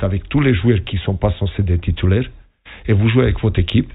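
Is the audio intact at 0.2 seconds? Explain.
Yes, the audio at 0.2 seconds is intact, with no fault present at that moment.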